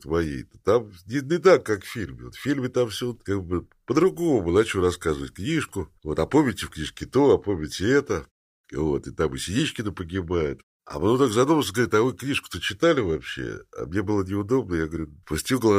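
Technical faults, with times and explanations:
Nothing here calls for a timestamp, since no technical faults turn up anywhere in the speech.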